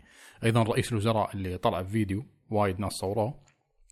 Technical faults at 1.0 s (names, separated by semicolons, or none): none